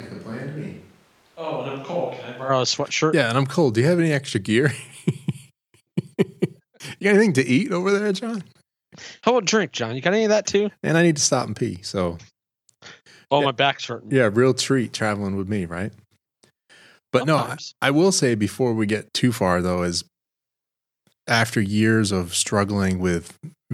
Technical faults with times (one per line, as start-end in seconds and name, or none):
0.00-2.48 switch to a distant microphone